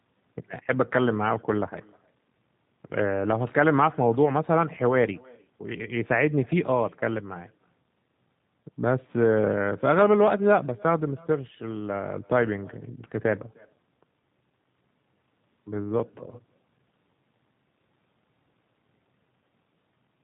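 The speech carries an echo with no canceller throughout. A faint copy, about 28 dB down, returns roughly a third of a second later, looped back from a far-end loudspeaker.

The whole clip is also squeezed through the G.729 codec. Its damage is plainly audible. Nothing above 4 kHz survives, and the speech sounds rough and synthetic, which fits an 8 kbit/s stream.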